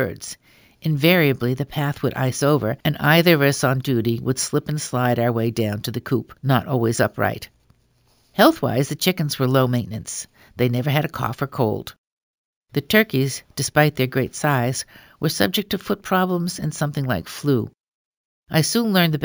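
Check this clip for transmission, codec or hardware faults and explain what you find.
One fault is present, and it runs through the whole clip: imaging from sample-and-hold upsampling. The speech was raised to a higher rate by repeating each sample, with no smoothing filter. The sound points to a 16 kHz source converted to 48 kHz. Mirror copies of the speech spectrum sit above the original band. The first fills 8 to 16 kHz at about 18 dB below the speech. It is heard as a bright metallic fizz that rises and falls with the speech.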